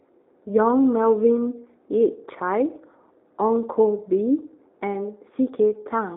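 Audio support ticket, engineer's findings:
Channel delay (comb filtering), whole clip, 0 to 6 s. Speech hollow and phasey, fixed notch near 3 kHz. Probable component: stereo-to-mono summing stage. One channel lags by roughly 0.15 ms, a few samples. Shared content cancels at evenly spaced frequencies, first dip around 3 kHz.

G.729 codec, whole clip, 0 to 6 s. Speech rough and synthetic, codec damage plainly audible. Band roughly 300 Hz to 3.7 kHz, nothing above 3.8 kHz. Probable component: VoIP leg, consistent with 8 kbit/s G.729A. Speech rebuilt from vocal tract filter, pitch predictor and sparse pulses, losing natural texture.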